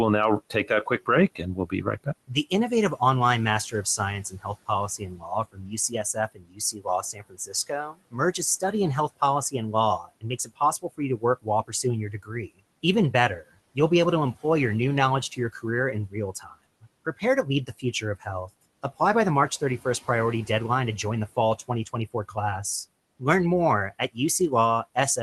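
Speech cut by the noise suppressor occurs at 0.5 to 2.52 s after "we'll now", 4.3 to 8.73 s, 9.09 to 13.77 s before "be able to employ", 16.08 to 18.49 s, and 21.68 to 22.37 s after "to join the fall". The suppressor mistook quiet speech for room noise. Brief parts drop by about 14 to 22 dB and sound swallowed.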